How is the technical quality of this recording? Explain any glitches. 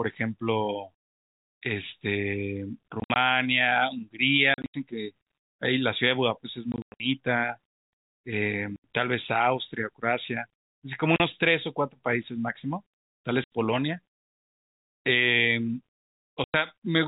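The recording is impaired by repeated dropouts across the call-bandwidth speech.

Packet loss filled with silence occurs at 3.0, 4.54, 6.72, 8.76, 11.16, 13.44 and 16.44 s. Lost packets were replaced with digital silence, losing 40 to 200 ms per event, consistent with 20 ms packets. The edges of the holes are hard, and the worst cluster at 6.72 s includes a 100 ms gap.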